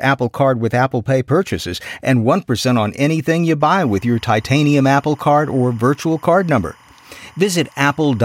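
Linear timecode running at 25 frames per second has leaked into this speech recording from a neighbouring track or cable. From 3.61 s, just after "on anything you", to the end, timecode bleed adds a chirping warble near 1 and 2 kHz, roughly 30 dB below the speech.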